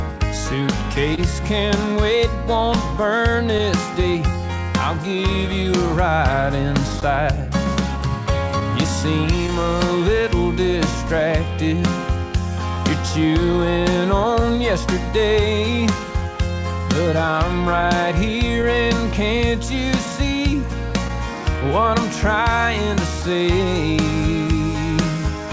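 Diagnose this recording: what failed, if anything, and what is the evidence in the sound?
Clock drift between sender and receiver, at the network and jitter-buffer stage: the sending clock runs roughly 1% slow relative to the receiver. The buffer therefore keeps draining, and the receiver must continually stretch the stream to avoid running dry. The evidence is a faint, persistent unsteadiness in timing across the whole recording rather than any single event. The audio itself is band-limited to 8 kHz, which fits the G.722 wideband call codec.

Repeated timing corrections in the jitter buffer run from 0.18 s to 25.21 s. To compensate for the slow sender, the receiver plays out at 99% speed, inserting short repeated or stretched fragments that together add somewhere around 150 ms over the span. Every correction pushes the same way, but the corrections are unevenly spaced, so they come across as small hiccups and a slightly uneven tempo rather than a steady slowdown.

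Scattered short gaps, from late or lost packets on the network path, appear in three clusters: about four between 1.15 s and 4.60 s (the longest around 30 ms), about seven between 7.01 s and 14.43 s, and about four between 17.81 s and 21.11 s, the latter two peaking around 15 ms. Concealment extends the preceding sound across each hole. Each is heard as a brief tick or smear, covering only a percent or two of each span.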